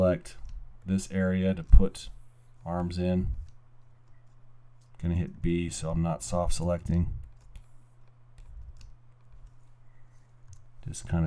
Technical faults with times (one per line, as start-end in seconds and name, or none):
none